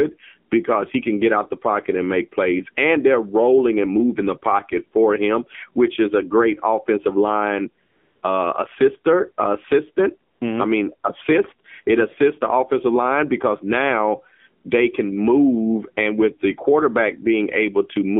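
Throughout, the speech carries AMR narrowband mobile codec damage. Everything sits between 200 Hz and 3.5 kHz, with a buzzy, synthetic edge that fits AMR-NB at about 7.4 kbps, rather than plain band-limiting. From 7.86 to 8.22 s, after "a great offensive line" and before "uh assister assistant", AMR comfort noise replaces the real background for 0.36 s with smooth, steady hiss. Again at 10.32 s, after "line uh assister assistant", it fills 80 ms. Unlike a dropout, the gaps hold switched-in noise, not silence.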